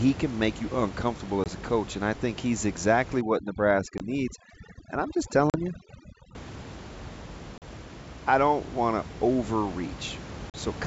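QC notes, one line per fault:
1.44 to 10.56 s, packet loss on an ADPCM call: hard silent gaps of 20 ms at 1.44 s (between "can make you uncomfortable" and "a coach and I") and 3.98 s, and 40 ms at 5.50, 7.58 and 10.50 s. Speech then returns slightly distorted while the decoder's predictor and step size resync. That brief mistracking sets it apart from a clean dropout.
3.21 to 6.35 s, overdone noise removal: after "I think he's exactly", the room noise, about 14 dB below the speech, drops and breaks up into twinkling specks, and quiet parts of the voice are gated with the noise. That flicker sets it apart from steady band-limiting.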